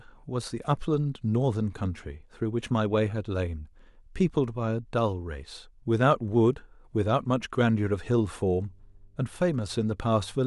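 Right at 8.37 s a mains hum creeps in under the speech and sits there until the clip ends at 10.47 s: a steady 50 Hz drone, roughly 35 dB down, the kind you get when a ground loop or nearby transformer bleeds the power line into the signal.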